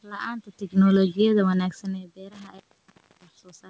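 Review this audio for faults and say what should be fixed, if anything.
Automatic gain falling, from 0.64 to 1.83 s: the level sinks by about 4 dB over a little more than a second. The automatic gain control judged the incoming sound too hot, or its background too strong, and eased its gain down gradually, so the background noise drops along with the speech instead of staying steady. That shared fall separates it from a talker simply moving back from the microphone. Setting the input level lower at the source, or capping how far and how fast the gain control can pull down, would prevent this.

Intermittent contact, from 2.32 to 3.51 s: a loose connection in the microphone cable or plug briefly goes open, and the signal drops out for about 0.68 s of that stretch. Small crackles mark the points where the contact breaks and then remakes, and faint hiss remains while the line is open, because the microphone signal no longer reaches the input. 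Reseating or replacing the cable and connector, and securing it so it cannot be knocked, would stop these dropouts.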